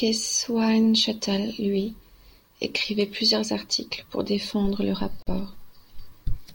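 A speech recording with one gap at a join of encoded pieces, running from 5.22 to 5.27 s. For about 44 ms the signal drops away mid-flow, with its edges smeared by the codec, and the speech then resumes exactly where it stopped. The segments were encoded separately and butted together untrimmed, so the encoder's start-up delay and final-frame padding remain in the audio as dead air.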